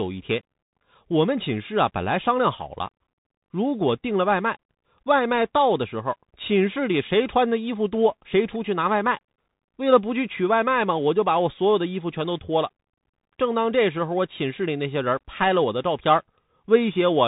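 Throughout, the speech carries Bluetooth CVSD headset codec damage: nothing above 3.8 kHz, scratchy s sounds, slope-overload distortion on loud peaks and granular hiss, consistent with a 64 kbps link.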